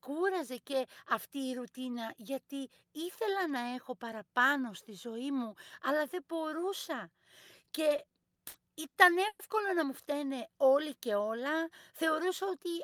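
From 7.89 to 9.41 s, packets arrived late and the jitter buffer kept running dry, causing repeated stalls (stutter): eight gaps, up to 110 ms, were filled by stretching the last sound before "να μου φταίνε όλοι", so the speech drags. After "φταίνε όλοι και όλα", from 12.02 to 12.67 s, a jitter buffer speed-up trims about 40 ms of pitch periods to reduce delay, hurrying the speech to 105% at unchanged pitch.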